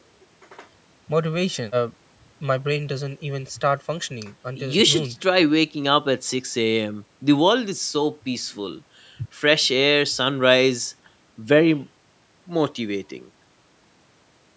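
No technical faults can be heard in this speech, which has passed through a call's microphone processing as expected.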